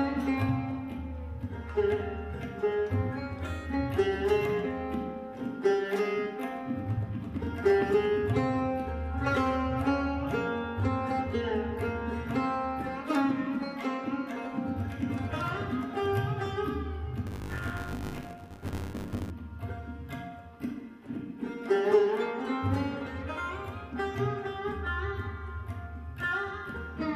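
From 17.26 to 19.31 s, buffer tearing gives a robotic 100 Hz buzz riding on the sound. The writer and reader of the playback buffer have slipped, so a small slice of each 10 ms period, roughly a sixth, repeats audio about 20 ms old. Waveform shows hard jumps every 10 ms; spectrogram shows thin vertical stripes at that spacing.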